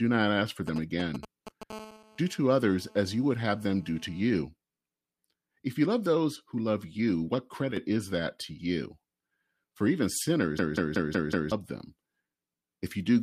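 GSM signalling bursts, from 0.67 to 1.72 s: a nearby 2G phone exchanging brief control transmissions is being rectified by the audio circuitry, so the speech picks up a galloping dit-dit-dit of short raspy 217 Hz buzzes, about 10 dB below the speech.

GSM phone buzz, from 1.73 to 4.41 s: the same phone moves into a call and transmits continuously at 217 bursts per second. The rectified pulses become a steady, hard, harmonic-rich buzz at 217 Hz, about 24 dB below the speech and unrelated to it.

One channel drops out at 7.72 s for about 50 ms. The level falls abruptly by about 6 dB and then recovers, which is likely caused by one stereo channel vanishing briefly before the mono sum, halving the shared content.

System hang loop, from 10.59 to 11.52 s: the computer or driver stalled while the sound hardware kept replaying its ring buffer. A 185.76 ms fragment repeats five times at 5.38 Hz, a machine-gun stutter, which fits an 8192-sample buffer. 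Roughly a second of real audio is lost.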